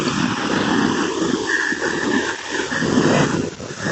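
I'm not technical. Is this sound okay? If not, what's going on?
No, not quite. Right near the end, from about 3.4 to 3.58 s, there's a brief, faint second copy of the speech trailing roughly 0.39 s behind the original. That's an echo leak. It's likely that someone on the call had their speaker on, their microphone picked up the playback, and the echo cancelling didn't fully remove it, so a bit got sent back. The call connection itself, which trims off the very highest treble, isn't the problem here.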